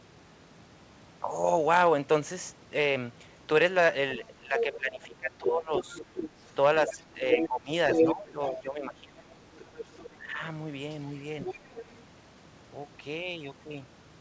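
Speech suppressed in double talk, from 4.18 to 6.03 s: the talker dips by up to about 15 dB for roughly a second in total, most likely because the echo canceller could not tell the talker from the loudspeaker echo and turned both down. The other side's voice leaking through, 4.57 to 5.07 s: a second voice sits about 5 dB under the speech, probably echo the canceller failed to remove from the microphone. It leaks again from 5.74 to 8.53 s at roughly equal level. Speech is suppressed in double talk again from 6.87 to 9.25 s, for about one and a half seconds in total with drops near 15 dB. A fainter leak follows at 9.55 to 10.14 s, about 15 dB down. A brief suppression comes at 10.16 to 10.4 s, around 10 dB deep, and a last leak at 10.91 to 12.01 s, about 10 dB under. Throughout, nothing reaches above 8 kHz, which fits a wideband call codec such as G.722.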